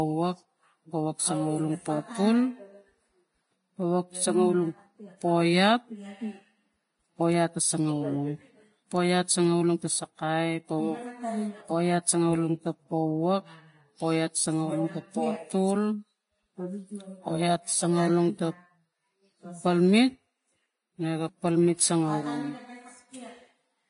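Speech, with plainly audible damage throughout that sounds like Vorbis compression. Nothing is heard above 10.6 kHz. The treble is hissy and grainy, where fine detail has turned to noise. Attacks are blurred. This is likely a low-rate Vorbis encode, around 30 kbps.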